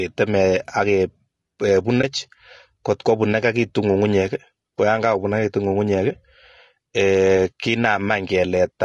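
Low-delay AAC compression runs through the whole speech clip. The rough, grainy texture, with noise filling the gaps between harmonics and a thin, synthetic-sounding top band, likely comes from AAC-ELD, whose short frames resolve pitch poorly; the plainly audible damage fits a bitrate around 32 kbps.

AAC frame loss with muting occurs from 2.01 to 2.04 s. The decoder zeroed the missing spectrum, and the overlapping windows fade the sound down and back up, leaving a brief dip. This is consistent with one lost frame of about 20 ms.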